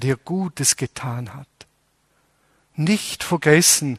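From start to finish the speech sounds dull, with a gurgling, granular roughness, the signature of MP2 compression at a starved bitrate, likely near 80 kbps. Upper sub-bands drop out and flicker back, while the remaining bands are coarsely quantised.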